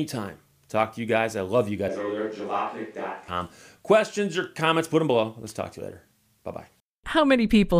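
A switch to a distant microphone from 1.89 to 3.28 s, right after "guys I love you", likely because the close microphone dropped out: speech turns abruptly hollow and thinner, falls roughly 5 dB, and picks up room noise.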